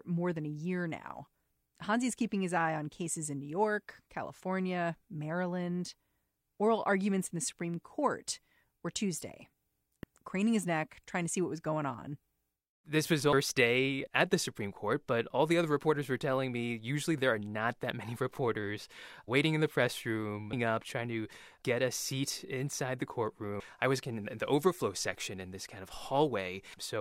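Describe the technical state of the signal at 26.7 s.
A brief glitch interrupts the speech from 26.70 to 26.74 s: damaged data in a compressed stream, where corrupted frames lose decoder sync until it finds the next header.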